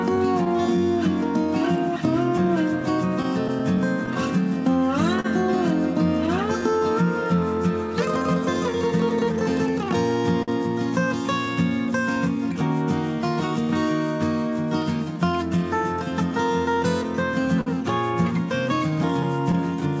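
Right from the start the sender's clock runs a few percent slow compared with the receiver's, so you're hearing clock drift between sender and receiver. The jitter buffer keeps draining, and the receiver has to keep stretching things to cover for it.

From 0.48 s to 18.91 s that shows up as repeated timing corrections. Playback sits at 97% speed, with short pieces repeated here and there, unevenly spaced, adding about half a second overall. It comes across as a slightly sluggish, faintly wobbly tempo rather than obvious hiccups.

Between 2.38 and 4.09 s there are scattered short gaps: a few tiny lost or late packets, none longer than about 10 ms, each patched by carrying the last sound forward. You get little ticks or smears rather than dropouts. The same thing happens again from 5.20 to 6.64 s, where one hole runs to about 40 ms and so smears more noticeably.

At 10.43 s there's a short stall from a late packet. 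The buffer ran dry and the receiver held the last sound for 51 ms until the packet arrived, which gives a brief hold with a faint buzzy dip. Another one hits at 17.61 s, held for 53 ms.

A last cluster of scattered short gaps sits between 19.23 and 19.83 s, again just small ticks.

The band stops at 8 kHz, which fits a wideband call codec such as G.722.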